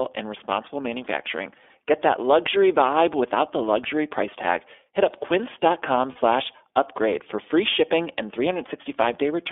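Throughout, the speech sounds thin and boxed-in, with a rough, slightly synthetic edge to every syllable. The top and bottom of the spectrum are missing, leaving roughly a 300 Hz to 3.5 kHz band. This is the iLBC codec, a narrowband VoIP coder that rebuilds each frame's excitation independently. The 20 ms framing fits its 15.2 kbps mode, and the coding damage is plainly audible.

From 6.12 to 6.19 s, just before "upgrade for free shipping", the speech briefly freezes into a held, faintly buzzy, breathy vowel lasting about 40 ms, then snaps cleanly back. These are lost iLBC frames, a gap that fits two dropped 20 ms packets. The decoder filled the gap by repeating the last pitch cycle blended with noise. Because each iLBC frame decodes on its own, the speech recovers at the next received frame.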